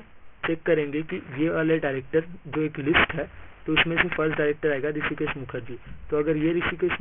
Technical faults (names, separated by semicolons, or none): aliasing